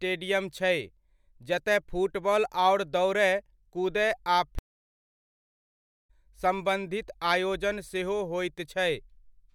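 At 4.59 s there's a stream reconnect: about 1.5 s of dead air until 6.10 s, then the speech picks up roughly a second and a half further on, with that stretch simply gone.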